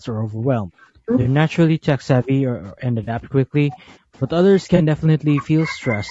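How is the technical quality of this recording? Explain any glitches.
The technical quality is poor. The speech is compressed throughout, and it is repeatedly pushed down by an echo canceller and interrupted by three brief dropouts.

Across the whole clip there is low-delay AAC compression, likely AAC-ELD at a rate in the region of 32 kbps. Its short frames resolve pitch harmonics coarsely, so the voice sounds rough and grainy, with noise filling the gaps between harmonics. That texture is constant, which sets it apart from the intermittent faults below.

From 0.0 to 1.1 s, 1.66 to 4.3 s and 4.65 to 6.1 s, the speech is suppressed in double talk, likely because the echo canceller couldn't separate the talker from the far end's echo. The voice dips by as much as around 40 dB. These are long, level-driven fades, unlike the brief glitches.

At 1.21 to 1.27 s, 3.03 to 3.09 s and 4.75 to 4.81 s there is AAC frame loss with concealment, each a 40 ms gap. 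The decoder fills each gap from the last good spectrum, leaving a smeared, noisy or phasey patch. Its abrupt, very short character distinguishes it from the slower double-talk ducking.

The top of the band stops near 8 kHz, which matches the call microphone processing.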